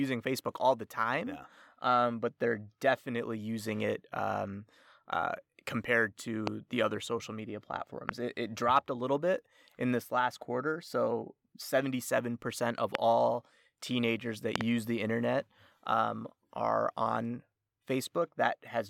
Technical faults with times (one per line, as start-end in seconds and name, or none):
6.47-6.49 loud pop
8.09-8.11 loud pop
12.95-12.97 loud pop
14.56-14.63 loud pop